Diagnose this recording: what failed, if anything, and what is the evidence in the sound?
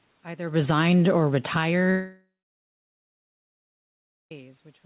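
Automatic gain falling in the call processing: from 0.5 to 0.85 s the level drops by about 7 dB over a third of a second as the AGC pulls its gain down. Unlike a talker moving away, the room background sinks together with the speech.

Long network dropout, stage network: at 1.9 s the last sound carries on as a fading buzz or hiss, then about two seconds of near-silence follow until speech resumes at 4.32 s with the gap's content gone, likely lost packets. A quiet pause or talker movement would not drop material.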